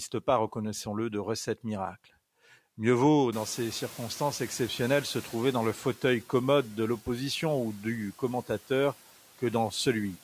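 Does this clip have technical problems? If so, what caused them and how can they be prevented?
Yes, there's a noise suppressor catching up problem. Around 3.5 s the room noise jumps by about 23 dB, and the suppressor's noise estimate lags behind, so from 3.32 s to 5.82 s the noise comes through with less reduction than it should. Over about 2.5 s the estimate adapts and the noise sinks by about 6 dB, settling just before "commode de l'opposition ou". After the rise, the room noise sits about 21 dB below the speech. To prevent it, use a suppressor that tracks its noise estimate faster after sudden level changes, or keep the room noise steady while recording.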